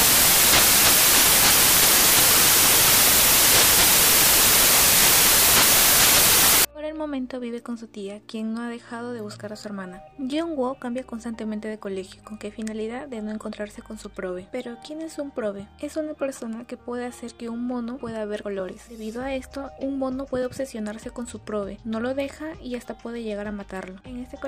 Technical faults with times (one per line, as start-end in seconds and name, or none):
0.00-6.65 samples built from the wrong bytes